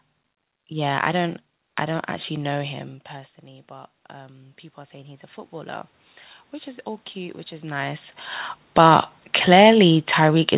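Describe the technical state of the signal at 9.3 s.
At 9.3 s the signal sits inside an automatic gain falling event. It runs from 8.62 s to the end of the clip at about 10.58 s. The gain control judged the input too loud, or its background noise too strong, and is pulling its gain down over a second or more. The speech fades gradually. The room noise behind it sinks by the same amount. Throughout, the audio carries the narrowband G.711 call sound, with nothing above 4 kHz.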